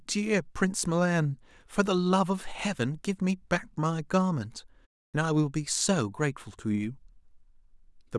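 A clipped start after a pause occurs at 5.10 to 5.14 s. After a 0.32 s gap, the output device had dropped into a low-power state and had not re-locked when speech resumed, so about 37 ms of onset is lost and the next word begins abruptly, missing its first sounds.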